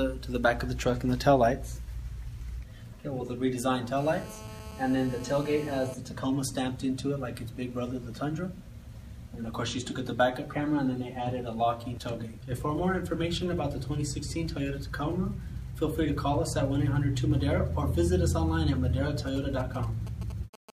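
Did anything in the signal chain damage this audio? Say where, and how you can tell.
Yes. From 3.97 to 5.94 s a steady, raspy 217 Hz buzz with many harmonics sits about 17 dB under the signal. This is GSM phone buzz entering the analogue wiring: a nearby 2G phone in a call transmits 217 bursts a second, which the circuitry rectifies.

From 19.27 to 20.70 s a galloping dit-dit-dit of short 217 Hz buzzes appears, roughly 15 dB below the signal. These are GSM signalling bursts, picked up in the analogue stage: the phone sends brief groups of radio bursts while signalling, and the audio circuit rectifies them.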